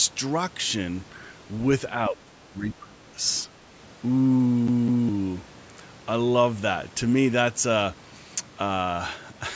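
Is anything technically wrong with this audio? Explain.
Yes, there are two kinds of fault in this speech.

Speech suppressed in double talk: from 2.1 to 3.2 s the level dips by up to roughly 20 dB, with a brief, shallower dip of a few dB at 3.43 s. The likely cause is an echo canceller that could not separate the talker from loudspeaker echo and attenuated both.

CD stuck on one turn: from 4.67 to 5.09 s, the same 0.21 s slice of audio plays twice in succession, with a short mute at each jump back. A scratch repeatedly returns the laser to one point, producing an even, mechanical stutter. Separately, the call microphone processing leaves nothing above 8 kHz.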